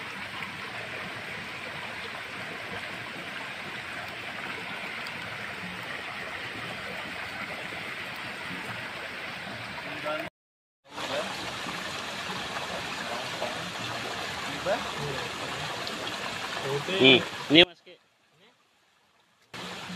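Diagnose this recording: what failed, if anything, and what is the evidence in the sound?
Near the end, from 17.64 to 19.54 s, the sound collapses by about 26 dB, leaving only a faint residue of what was there before. The pattern points to one channel inverted, most likely from a polarity swap in the analogue wiring ahead of a mono sum. Whatever is common to left and right cancels when the reversed channel is added, so centred content vanishes and only the inter-channel difference survives.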